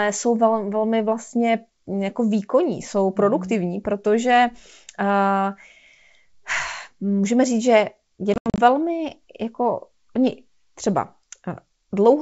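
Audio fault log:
8.34–8.59 s, packet loss on an ADPCM call: between "můžeme říct že" and "velmi jako oni třeba", about 160 ms of audio drops to hard-edged silence in several gaps spread over 240 ms, the longest 80 ms, roughly seven packets. Unlike a plain dropout, the sound after each hole comes back slightly distorted, because the decoder's predictor and step size have drifted from the sender's and take tens of milliseconds to recover within the wideband G.722 stream.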